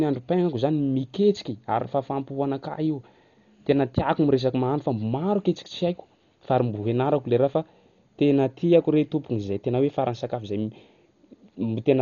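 From start to end, the speech is dull and boxed in. Nothing sounds above 7 kHz, so sibilants lose their edge. A rough, fluttering noise clings to voiced sounds and tonal parts. The damage is heavy and constant. This points to Dolby Digital compression, likely at a very low rate. The encoder narrowed the band and left many frequency lines without detail bits. The decoder filled them with noise. The sound fits a bitrate around 40 kbps.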